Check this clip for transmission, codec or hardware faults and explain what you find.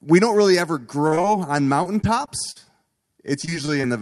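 Two kinds of transmission fault are present, both from lost packets on a call path whose top end stops at 12 kHz, which fits Opus at around 48 kbps.

Short concealed packet loss occurs at 1.07 to 1.13 s, 1.15 to 1.19 s and 1.21 to 1.25 s, with about 40, 20 and 20 ms missing. The decoder bridged each hole by extending the preceding sound before blending back into the real signal, heard as brief smears or wobbles in quick succession.

Repeated packet loss (robotic sound) affects 1.83 to 2.57 s, with four gaps up to 44 ms covering about 14% of that span, and 3.41 to 3.85 s, with five gaps up to 24 ms covering about 22%. Each gap is patched by continuation, and the next follows soon after, giving choppy sound with fragments missing.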